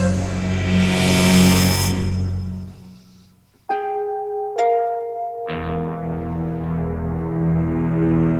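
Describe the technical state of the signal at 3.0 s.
Nothing is wrong with the signal at 3.0 s; it passes through that moment intact, with no dropout, distortion or other audible fault.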